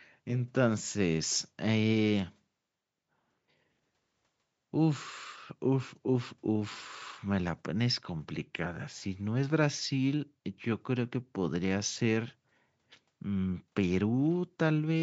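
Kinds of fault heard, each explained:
Nothing here counts as a fault: the speech simply carries the usual marks of call microphone processing, with the lowest bass trimmed away and nothing above 8 kHz, which is just how that path normally sounds.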